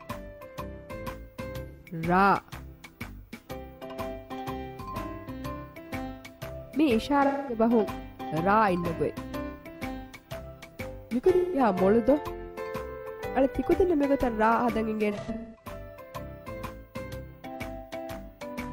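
AAC frame loss with concealment occurs at 1.67 to 1.83 s, 7.26 to 7.58 s, 11.36 to 11.60 s and 15.11 to 15.69 s. The last loss is scattered, with its longest gap around 200 ms. The decoder patches the missing frames from the last good spectrum, producing smeared, noisy or phasey stretches.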